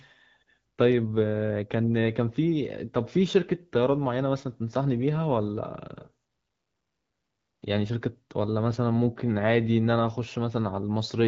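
Nothing stood out on listening to this speech, which carries the slightly band-limited character of AMR wideband (HD Voice) coding at a rate that sounds consistent with its clear 12.65 kbit/s mode.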